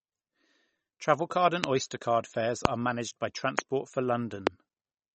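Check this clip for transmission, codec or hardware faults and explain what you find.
Yes, two kinds of fault are present: codec damage throughout and four loud pops.

The whole speech clip has plainly audible codec damage, likely from MP3 compression. Nothing remains above 8.4 kHz. Weak frequency lines drop in and out between frames, giving a watery, swirly texture. The damage fits a low bitrate near 32 kbps.

There are four loud pops, each single and about 20 ms long, at 1.64–1.66 s, 2.65–2.67 s, 3.59–3.61 s and 4.47–4.49 s. The second falls between "card fares" and "managed by". The third comes just after "managed by". Each stands roughly 25 dB above the speech, which continues underneath. A sudden voltage step or pulse, from a plug, switch, static discharge or driver glitch, is the likely cause.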